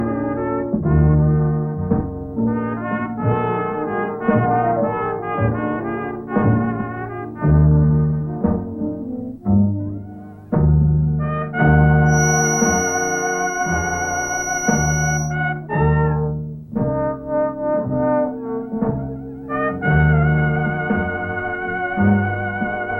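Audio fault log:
12.04–15.37 s, feedback whistle: a thin, steady tone at 5.8 kHz sits behind the sound for a little over three seconds, roughly 10 dB beneath it and swelling and fading slowly in level. The likely cause is a loudspeaker-to-microphone loop held right at the edge of feedback, sustaining one frequency without running away. On a spectrogram it shows as a single narrow horizontal line at 5.8 kHz. The waveform shows little change because the tone is so far below the main signal.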